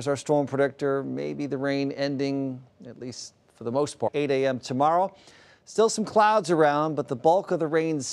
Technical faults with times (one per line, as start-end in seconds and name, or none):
4.07-4.09 stream segment skipped